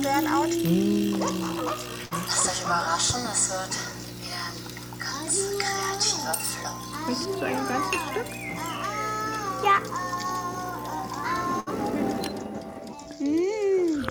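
At 2.05 s and again at 11.60 s there's a burst of packet loss, each lasting under a tenth of a second. A run of packets never made it in time, so the receiver stretched the last bit of sound for about 54 ms and then 65 ms, fading it down as a held buzz or hiss. When the audio comes back, roughly 60 ms has been skipped each time, so you hear a small jump.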